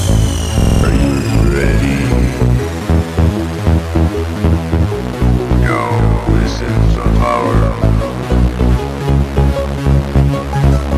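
From 0.60 to 0.84 s a rapid machine-gun stutter at about 21.5 Hz replaces the sound, as one 46 ms fragment repeats five times. This system hang loop comes from the sound hardware cycling a frozen ring buffer, which fits a 2048-sample buffer, and roughly a fifth of a second of audio is lost.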